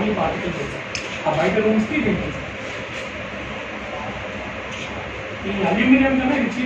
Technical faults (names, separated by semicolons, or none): none